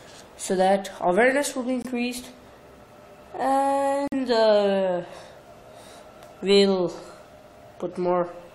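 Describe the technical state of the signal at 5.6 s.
At 5.6 s the signal is intact, with no audible fault at that moment.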